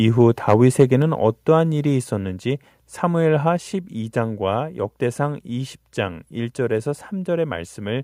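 From 0.48 to 0.83 s the loudest syllables turn harsh and crackly, with their peaks flattened. That's microphone overload, likely from the input gain being set high enough that the signal pushes about 4 dB past the converter's ceiling, squaring off a small share of the waveform.

Then the level drops in clean steps at 1.02 s, 2.04 s and 3.57 s, by about 3 dB, 3 dB and 2 dB, with the voice and background falling together. It sounds like the microphone volume stepped down, likely the call software easing the input gain back after that overloaded stretch.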